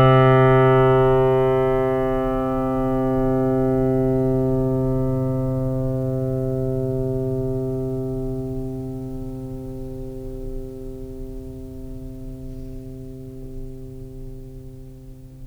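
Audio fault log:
No audio faults heard.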